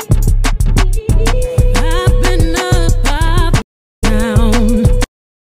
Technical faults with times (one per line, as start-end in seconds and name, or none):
3.62-4.04 stream reconnect